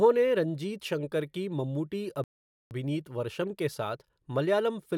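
At 2.24 s the speech halts in a rebuffering stall: the player has exhausted its downloaded audio and waits for more before continuing. The gap lasts until 2.71 s, adding about 0.47 s of silence, and playback then picks up exactly where it left off, on "वर्षम् के", with nothing skipped. On a waveform this appears as a flat line between intact speech; a spectrogram shows a blank vertical band.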